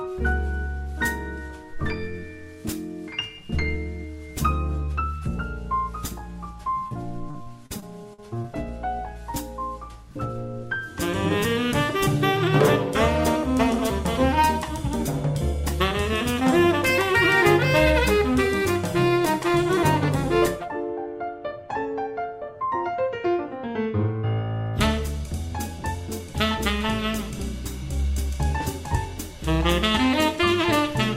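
A quick hiccup shows up first at 6.87 to 6.93 s. That's short concealed packet loss, where about 40 ms of audio didn't arrive in time and the receiver covered roughly 31 ms of it by carrying the previous sound forward, then crossfading back into the real signal. You hear a brief smear or wobble, and anything very short in that window can simply disappear. Then from 7.31 to 8.46 s it gets worse, with repeated packet loss giving that choppy, robotic character. Six separate holes land within just over a second, the longest about 43 ms, adding up to around 200 ms missing. Each one gets patched by extending whatever came just before, about 190 ms of fill in total, so roughly 17% of that stretch is synthetic. Those back-to-back patches produce the choppy, stuttering texture, with bits of the sound missing.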